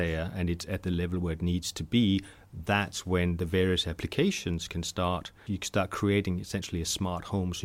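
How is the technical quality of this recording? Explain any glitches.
Nothing in the recording stands out as a glitch; it holds together without any dropouts, clicks or other technical hiccups to explain.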